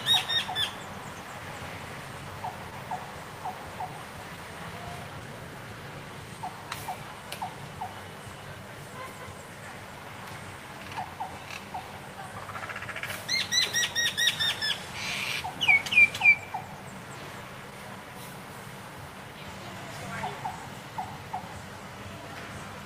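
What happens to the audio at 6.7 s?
At 6.7 s the audio is affected by clock drift between sender and receiver, which runs through the whole clip. The sender's clock runs about 1% slower than the receiver's, so the receiver's jitter buffer drains a little faster than it is refilled. To keep playing without running out, the receiver keeps patching the gap, and the effect is a recurring timing unsteadiness across the sound rather than a single event.

That moment also falls inside a stretch of repeated timing corrections lasting from 0.72 s to 22.23 s. Because the sender is slow, the receiver repeats short pieces of audio at uneven intervals, all in the same direction, which amounts to playback at 99% speed. Over the stretch the repeats add roughly 200 ms. Each one can register as a small hiccup or a wavering tempo, and 6.7 s is one point within that continuing pattern.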